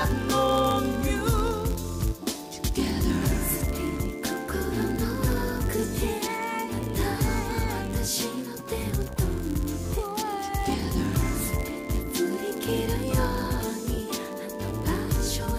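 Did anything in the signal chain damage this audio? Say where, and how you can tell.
Yes. A block size mismatch (padded) at the driver or buffer stage runs through the whole clip. A steady buzz at about 91.5 Hz sits under the sound, and everything plays slightly slow, at 0.996 of normal speed, while pitch stays about where it should. One stage is handing over blocks a little shorter than the next stage reads, and the shortfall is filled with silence. That produces a tiny gap in every block, repeating at the block rate. Mains hum would sit at 50 or 60 Hz and wouldn't slow the audio. Random dropouts wouldn't come at such a fixed rate.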